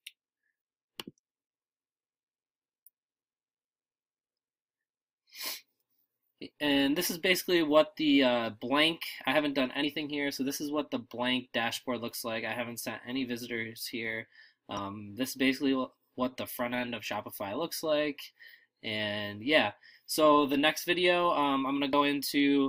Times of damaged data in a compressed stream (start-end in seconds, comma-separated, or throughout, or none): 9.82, 14.77, 21.92